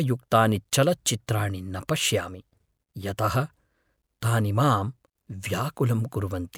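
No technical faults occur at any point in the recording, so there is nothing to describe in time order.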